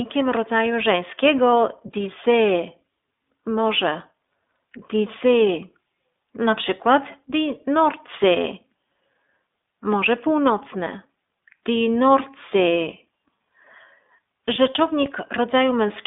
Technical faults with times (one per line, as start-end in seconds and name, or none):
0.00-16.06 iLBC codec